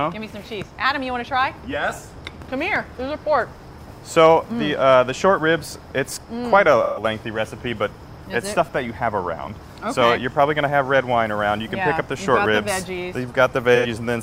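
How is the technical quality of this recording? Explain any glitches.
The recording has three audible glitches: two short patches of AAC frame loss and one momentary dropout to digital silence.

AAC frame loss with concealment occurs from 6.84 to 7.03 s and from 13.75 to 13.86 s. Missing frames were rebuilt by the decoder from the previous good spectrum, so each gap of roughly 0.13 s and 0.09 s sounds smeared, noisy and phasey rather than silent.

A block of digital silence appears at 12.46 s. For about 0.73 ms the sound drops out and returns abruptly, with no fade at either edge, which fits a 32-sample gap where the output buffer was not filled in time. It is heard as a brief tick.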